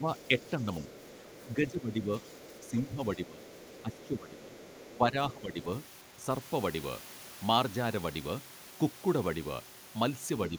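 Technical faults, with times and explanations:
0.00–6.29 s, speech suppressed in double talk: across this opening stretch the talker's level sags repeatedly, by roughly 10 dB at the deepest, and the dips add up to around four seconds in total. The voice thins and drops back in pieces rather than holding a steady level. This is likely an echo canceller facing both sides talking at once: unable to separate the near talker from the loudspeaker return, it attenuates the whole microphone signal, taking the wanted speech down with the echo.
0.16–0.50 s, 1.03–1.44 s, 2.23–2.71 s, 3.43–5.33 s, other side's voice leaking through: a second, faint voice sits under the talker in these four windows, about 25 dB below the main speech. The first three are short scraps under half a second each, and the last runs for nearly two seconds. This is likely far-end audio from the talker's loudspeaker reaching the microphone and surviving echo cancellation, so residual echo gets through while the canceller is struggling with the overlap.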